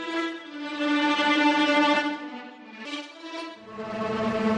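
At 2.85 s the audio lurches into a section at the wrong speed. It runs to the end, at 4.57 s. From that moment everything plays 1.33 times too fast. Pitch rises with the tempo, by about five semitones. The sound turns higher, brighter and hurried, with a sudden step at the join. The likely cause is playback or editing against the wrong clock, so the section runs faster than it was recorded.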